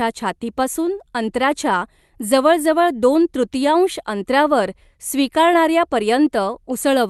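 No technical faults can be heard in the speech, which has come through a WebRTC call path whose Opus coding leaves its usual light coding texture and a top end that stops at about 12 kHz, as expected for a call codec at a moderate bitrate.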